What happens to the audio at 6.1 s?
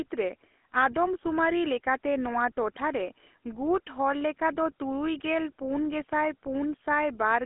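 At 6.1 s, as everywhere else in this speech, the signal has passed through the GSM full-rate codec. That coder models the vocal tract and drives it with a sparse, regularly spaced pulse excitation at a low bitrate, which fits GSM's 13 kbps. The result is a plainly audible buzzy, gravelly roughness. The band is narrowed to a telephone line of roughly 250 Hz to 3.5 kHz, with nothing above 3.8 kHz.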